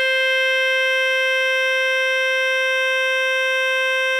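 Music, with no technical faults to be heard.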